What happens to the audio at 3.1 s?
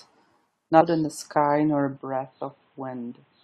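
At 3.1 s, two faults overlap. The first is damaged data in a compressed stream, lasting from 3.10 to 3.12 s. A corrupted stretch of the encoded stream makes the decoder misread its frames, lose sync and hunt for the next valid frame header. The result is a brief glitch, heard as a chirp, squawk, click or short hole. Unlike a plain dropout, it comes from the decoder losing its place in the stream, and it is over in about 20 ms.

Underneath it, the sound has been dull and boxy since 1.97 s and stays that way to the end, with nothing above 4.1 kHz. The level is a few decibels lower, and there is a new noise floor roughly 40 dB under the signal. The likely cause is the input switched to a poorer device, such as another microphone or a headset's call profile. What sets this apart from a low-pass filter or a codec bandwidth cut is that the band, level and background noise all change together at one instant, with no silence at the switch.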